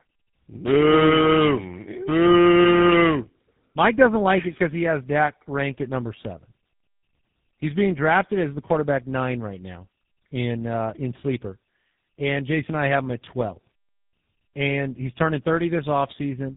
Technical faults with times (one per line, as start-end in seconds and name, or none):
0.00-16.57 tandem speech coding